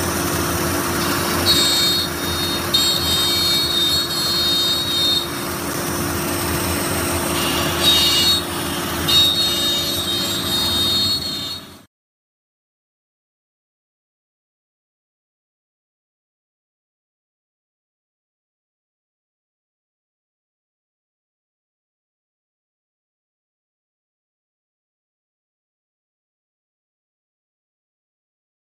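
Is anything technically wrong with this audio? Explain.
Yes, there is one fault: damaged data in a compressed stream, from 5.71 to 5.75 s. Corrupted bytes there made the decoder misread or reject frames and lose sync until it found a valid frame header. The result is a 40 ms disturbance that breaks the surrounding audio. On a spectrogram this shows as a short vertical band or gap that interrupts the surrounding pattern. On a waveform it shows as a brief irregular section that does not continue the signal on either side.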